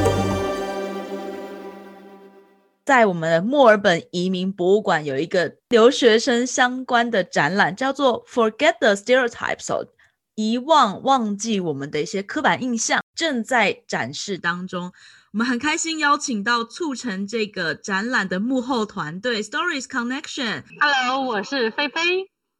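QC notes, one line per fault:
14.36–22.60 s, channel delay (comb filtering): from 14.36 s to the end, one channel runs late by about 0.7 ms. When the two channels fold to mono, they cancel at evenly spaced frequencies, giving a hollow, phasey colour. On a spectrogram, fixed dark horizontal bands start at 14.36 s, the first near 700 Hz and then repeating roughly every 1.4 kHz.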